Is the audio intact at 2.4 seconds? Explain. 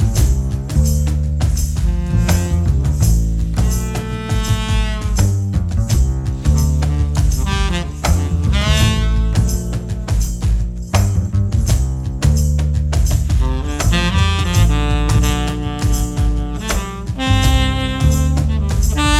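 Yes, at 2.4 seconds the audio is intact, with no dropout, click, distortion or other fault at that moment.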